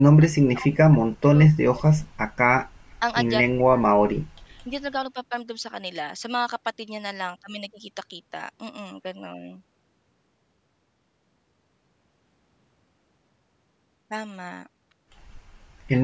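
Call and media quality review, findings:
Speech suppressed in double talk, 0.0–2.18 s and 3.44–4.73 s. Speech dips by up to roughly 40 dB. Likely echo canceller mistaking near-end speech for loudspeaker echo during simultaneous talk and attenuating both. Content stays band-limited below 8 kHz, as expected from call microphone processing.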